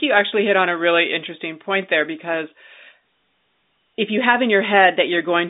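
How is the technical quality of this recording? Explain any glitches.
The technical quality is sound and there are no glitches to explain, just the narrow band of ordinary G.711 telephone coding with nothing heard above about 3.8 kHz.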